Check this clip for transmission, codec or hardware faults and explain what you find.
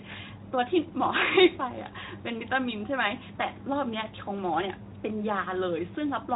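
No transmission, codec or hardware faults can be heard: the speech runs through a Speex path working as intended, with light coding texture consistent with a setting around 15 kbps and a band that stops near 3.8 kHz.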